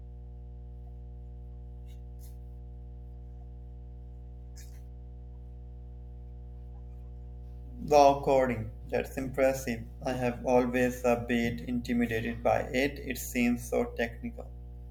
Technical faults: mains hum

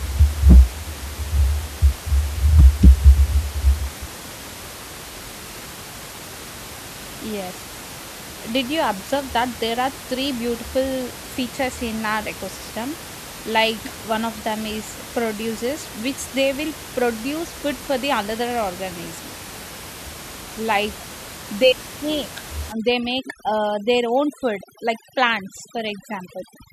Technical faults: overdone noise removal

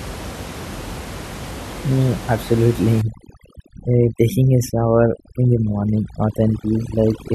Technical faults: overdone noise removal

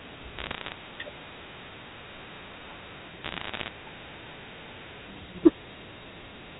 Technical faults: bit errors on a digital phone line

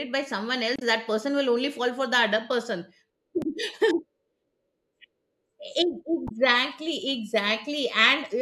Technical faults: damaged data in a compressed stream

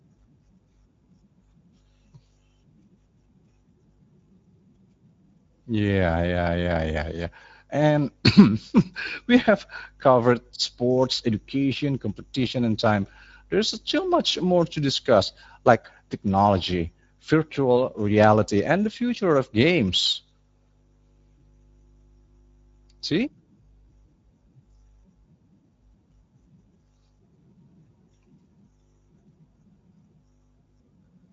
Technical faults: Speex codec

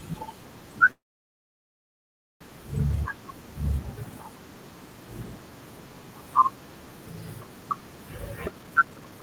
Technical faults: call audio freeze; jitter buffer speed-up

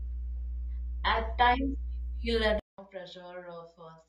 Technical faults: mains hum; adaptive stream starting at a low bitrate; input switched to a poorer device

